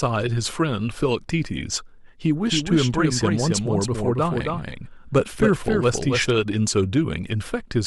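A second, slower capture path or an out-of-step edit has likely mixed the speech in twice, producing a doubled audio track from 2.46 to 6.30 s. A dry, full-band copy trails roughly 300 ms behind, about 5 dB quieter, starting and stopping abruptly.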